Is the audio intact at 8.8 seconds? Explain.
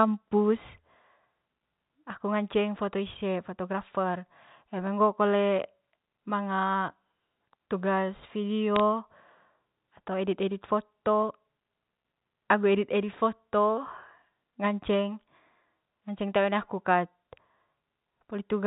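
No. Bit errors on a digital phone line damage the sound from 8.76 to 8.80 s. Over those few tens of milliseconds, some of the stored bits on this G.711 mu-law line come through flipped, roughly one bit in a thousand. Each flipped bit corrupts a single sample. Where a high-order bit, or the sign bit of a loud sample, is hit, the sample leaps far from its true value. Such a hit makes a sharp tick over the speech.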